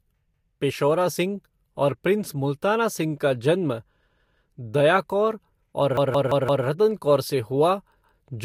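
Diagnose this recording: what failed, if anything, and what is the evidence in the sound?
The playback buffer stage failed four times: fresh audio did not arrive in time, so the driver replayed its previous block, a repeated buffer fault. Each repeated piece lasts about 171 ms, which fits an 8192-sample buffer. The speech stutters as that piece sounds twice at 0.34 s, three times from 4.10 s, five times from 5.97 to 6.66 s, and twice at 8.02 s. Every repeat meets the last with a hard join, and no speech appears to be skipped afterwards.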